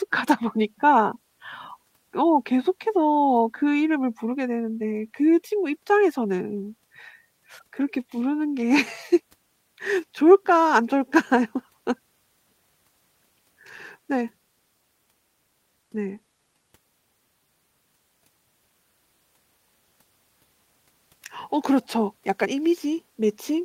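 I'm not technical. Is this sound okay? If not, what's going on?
Yes, I hear no technical faults in this speech recording.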